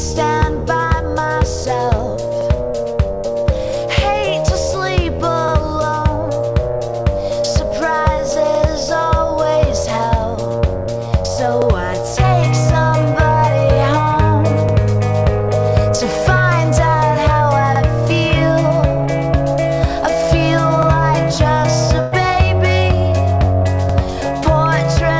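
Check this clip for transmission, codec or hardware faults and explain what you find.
Two faults are present: a repeating stutter from overlapping chunks and one burst of packet loss, both carried over a G.722 call path whose band stops at 8 kHz.

Overlapping chunks occur at 2.41, 5.48, 8.55, 11.62, 14.69, 17.76, 20.83 and 23.89 s. The audio arrives in 3 s chunks, each starting about 69 ms before the previous one ended, so that slice plays twice. Each join produces a short stutter. Unlike packet loss, it recurs at a strict interval and nothing is missing.

A burst of packet loss runs from 22.00 to 22.14 s. Roughly 120 ms of audio never arrived, and the receiver filled the gap by extending the last sound and fading it. The result is a held, dimming smear followed by a jump forward, with no repeated material.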